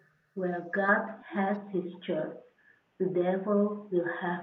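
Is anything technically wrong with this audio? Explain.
Yes. From 0.89 s to the end, the input was likely switched to a poorer device. That narrower path cuts the high end, so the speech turns dull without a gap or level jump, over a faint new noise floor.

From 1.12 to 1.36 s, speech was likely suppressed in double talk: the echo canceller turned the talker down, causing a deep dip of around 40 dB lasting roughly 200 ms.

From 1.92 to 1.97 s, a likely echo leak let loudspeaker pickup slip past cancellation, leaving a very faint copy of the speech delayed by 158 ms.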